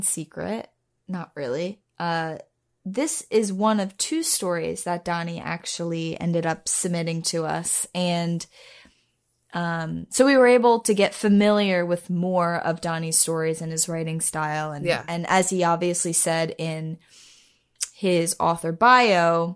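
No technical faults can be heard anywhere in the clip.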